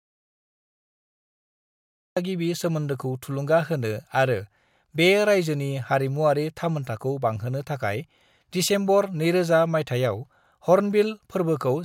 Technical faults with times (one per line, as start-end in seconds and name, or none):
0.00-2.17 audio dropout to silence